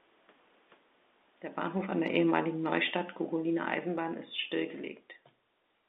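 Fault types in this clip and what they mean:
Automatic gain falling: the gain control judged the input too loud or its background noise too strong and eased its gain down about 7 dB, so speech and background sink together.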